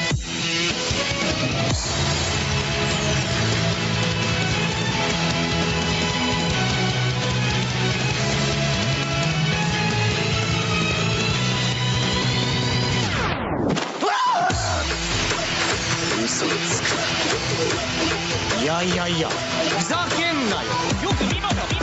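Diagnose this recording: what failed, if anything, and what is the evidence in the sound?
Gain pumping runs through the whole clip. The level swings by around 10 dB. Loud and soft parts sit close together. The likely cause is input gain set too high, with a fast limiter pulling it down. The band ends at 8 kHz, as expected from the call's microphone processing.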